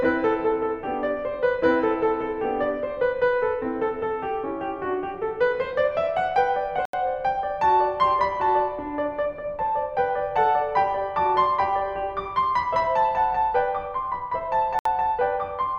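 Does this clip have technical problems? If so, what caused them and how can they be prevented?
Yes. The music cuts to silence twice, at 6.85 s for 81 ms and at 14.79 s for 64 ms, then resumes. This is likely a Bluetooth stall: delayed packets let the headphones' buffer run dry. A waveform shows flat gaps, and a spectrogram shows narrow blank vertical stripes. Keeping the phone close to the headphones and away from other 2.4 GHz interference prevents it.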